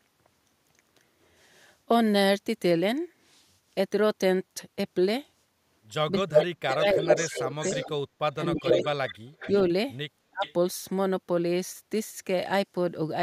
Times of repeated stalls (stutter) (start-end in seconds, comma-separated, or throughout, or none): none